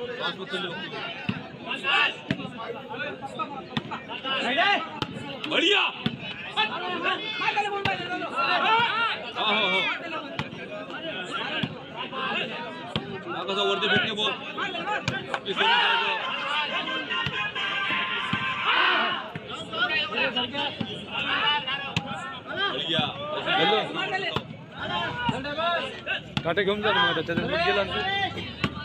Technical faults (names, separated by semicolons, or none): damaged data in a compressed stream